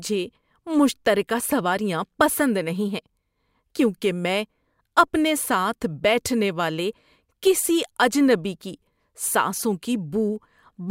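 Sample clock jitter runs through the whole speech clip. Samples land a couple of microseconds off. A faint hiss, about 35 dB down, rides on louder, brighter sounds.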